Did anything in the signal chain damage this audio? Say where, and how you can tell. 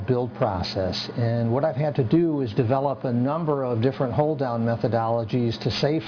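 Yes: aliasing at the sample-rate conversion stage, throughout. Resampling to about 11 kHz without filtering folds content above 5.5 kHz back down as gritty, metallic, unrelated tones.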